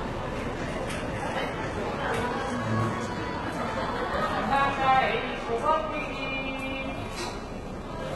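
Throughout this everyday sound recording, the treble is gritty and metallic, ending abruptly at 11.8 kHz, likely from heavy HE-AAC compression around 16 kbps. Unlike plain low-pass filtering, the treble is copied upward rather than simply missing.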